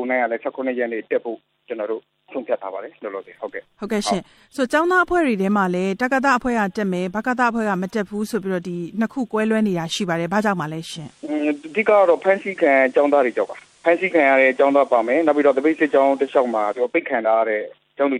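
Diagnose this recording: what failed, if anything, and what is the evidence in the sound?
At 10.8 s the sound changes over roughly 0.29 s: a hiss floor appears, around 35 dB below the signal, and the level shifts by about 2 dB. At 17.0 s it returns to the quiet version. This is digital radio blending to analogue in the reception stage. The hybrid receiver lost its digital stream and cross-faded to the same station's FM broadcast, whose noise floor is audible, then blended back.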